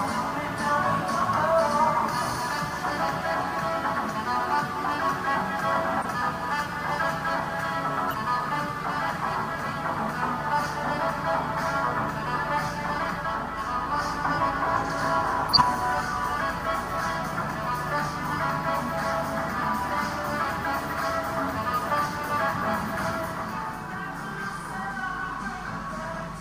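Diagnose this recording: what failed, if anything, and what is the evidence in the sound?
Codec stage, corrupt frame decoded: glitches at 6.02, 8.08 and 15.49–15.63 s, error peaks rising from about −20 to −5 dBFS. Damaged frames played with energy at wrong frequencies, unlike concealed dropouts.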